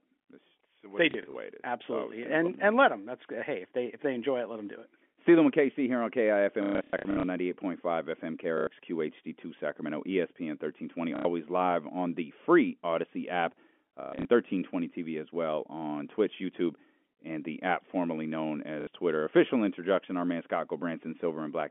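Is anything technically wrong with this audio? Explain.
Yes. Packet loss with last packet repeated occurs at 1.11–1.35 s (after "it's they"), 6.63–7.23 s (after "here on"), 8.58–8.67 s, 11.16–11.25 s (before "live on the free"), 14.01–14.25 s and 18.81–18.87 s. Packets went missing and the receiver replayed the last good one to fill each gap. The losses fit 30 ms packets. A replay seldom joins in step with the pitch, so the longer runs buzz at about 33 Hz, giving a brief robotic stutter, worst at 6.63 s. This sits over the narrow 250–3400 Hz telephone band of the G.711 line.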